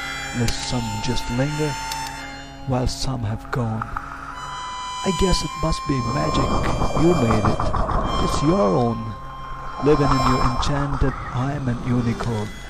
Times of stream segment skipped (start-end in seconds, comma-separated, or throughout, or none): 11.06-11.12